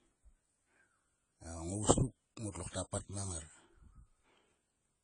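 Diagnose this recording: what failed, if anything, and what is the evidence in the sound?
The failure sits at the codec stage and affects the whole recording. Nothing is present above 10 kHz, and the speech sounds dull and smeared, with a fizzy, warbling texture on sibilants and sustained vowels. The likely cause is AAC compression, AAC-LC at a low bitrate. The damage fits roughly 24 kbps. Starved of bits, the encoder lowers its cut-off and quantises the frequency lines coarsely, leaving spectral holes that shift from frame to frame.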